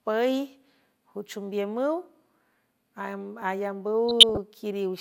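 At 3.42 s the speech skips, with a slight jump in the sound and no gap of silence. The likely cause is a dropped buffer (overrun), where the program fell behind and a tiny slice, under two milliseconds, was overwritten and lost.

From 4.09 to 4.38 s the speech picks up short blips of noise in single frequency bands. This is DAB burbling. Weak reception let bit errors, a small fraction of a percent, slip past error correction and corrupt the MP2 audio data. That fits roughly a dozen damaged frames.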